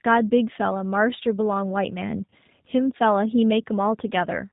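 Throughout, the speech passes through what sounds like the G.729 codec at about 8 kbit/s, likely the G.729A variant. Each 10 ms frame is rebuilt from a vocal tract filter, a pitch estimate and a few pulses, so nothing above 4 kHz survives and the voice sounds plainly rough and synthetic.

From 2.31 to 2.34 s, VoIP packet loss is concealed by the speech codec. The missing 20 ms suggests two lost frames. The decoder stretches its last pitch and filter with falling gain, leaving a brief buzzy or noisy, fading smear. Because each frame builds on the last, the voice stays weak or distorted just afterwards.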